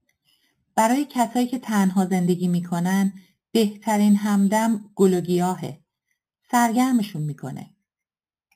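It's a speech clip with imaging from sample-and-hold upsampling running the whole way through: a bright, metallic fizz tracking the speech at about 19 dB down, with the first mirror image filling 4 to 8 kHz. That points to 8 kHz audio raised by plain sample repetition without smoothing.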